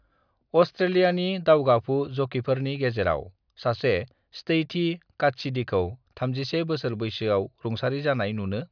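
Nothing goes wrong anywhere in this bit of speech, so there's no fault to point to at any moment.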